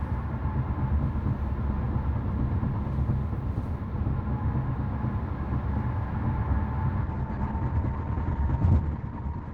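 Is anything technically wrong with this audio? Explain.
Yes. From 7.03 s to the end, the treble abruptly thins, with nothing above 8.8 kHz, and the sound turns grainy with no gap. This is an adaptive stream at a lower bitrate. The connection slowed and playback switched mid-stream, consistent with Opus dropping from about 64 to 12 kbit/s.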